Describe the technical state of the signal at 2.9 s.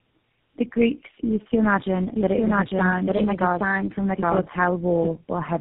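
At 2.9 s the signal carries tandem speech coding, present throughout the clip. The audio has passed through three low-rate speech coders in sequence, probably G.729A twice and then GSM full rate. Each coder re-encoded the previous one's degraded output, so the damage compounds: the speech sounds rough, muffled and warbly, and nothing is left above 3.8 kHz.

The same moment falls inside a doubled audio track, which runs from 2.16 s to 5.09 s and starts abruptly just after "used to imagine". A second full-band copy of the speech plays about a second behind the original at roughly the same loudness, with no decay or room colour. The likely cause is a second, slower capture path mixed in alongside the first.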